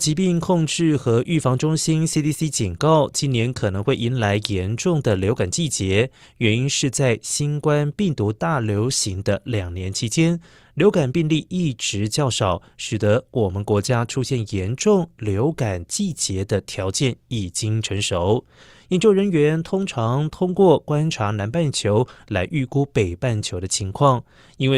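No technical faults can be heard anywhere in the recording. There is nothing to locate in time or to describe.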